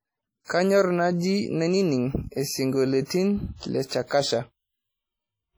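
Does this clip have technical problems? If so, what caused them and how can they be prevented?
Yes, the speech has a ringing, washy quality from start to finish, with a hiss that swells and fades along with the talking. That's heavy damage that sounds like WMA compression, likely from an encode at a low bitrate, something that fits roughly 32 kbps. The transform smears quantisation noise across tens of milliseconds around each sound, and quieter spectral detail gets dropped outright. To prevent it, keep a lossless or high-bitrate master and encode once at a decent rate.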